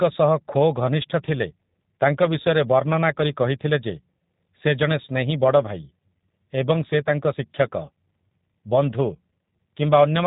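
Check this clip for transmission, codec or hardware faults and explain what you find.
There's one fault, running the whole way through: G.729 codec coding. The speech is rebuilt from a vocal-tract filter and pulses at what sounds like 8 kbit/s, so it's plainly rough and synthetic, with nothing above about 3.8 kHz.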